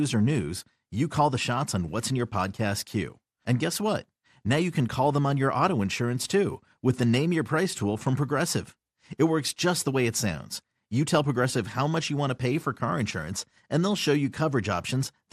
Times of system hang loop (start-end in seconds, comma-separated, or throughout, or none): none